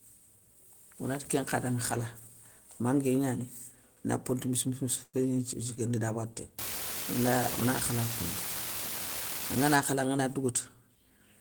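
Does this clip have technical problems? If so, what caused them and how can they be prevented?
Yes. A call audio freeze occurs at 5.03 to 5.16 s. The speech gives way to a fading buzz that drops to about 20 ms of silence. The likely cause is delayed packets emptying the jitter buffer. The speech resumes where it stopped, roughly 0.1 s late, with nothing lost. A network path with steadier delay, or a deeper jitter buffer, would prevent it.

An unreliable data bit runs from 6.59 to 9.76 s. A constant crackle and fizz sits over the speech and continues through the pauses. One marginal data line flips its bit in random samples, and each flip adds a spike of equal size. Reseating or replacing the faulty cable, connector or converter would prevent it.

A jitter buffer speed-up follows from 10.22 to 11.18 s. The speech runs at about 109% speed with unchanged pitch and sounds hurried. The receiver repeatedly cut out short pitch-period slices, about a tenth of a second in total, to shrink an overfull buffer. 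Avoiding bursts of late packets, or trimming the buffer more gradually, would prevent it.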